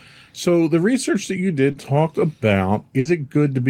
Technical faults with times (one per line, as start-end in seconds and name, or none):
1.71-1.75 short concealed packet loss
2.99-3.07 burst of packet loss